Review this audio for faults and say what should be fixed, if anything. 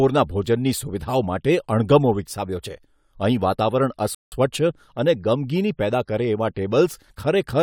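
A rebuffering stall at 4.15 to 4.32 s: the player exhausted its downloaded audio and paused until more data arrived. The speech drops to silence for about 173 ms, then resumes exactly where it stopped, losing nothing but stretching the timeline. Preventing it means keeping a deeper playback buffer or adapting to a lower bitrate before the buffer runs dry.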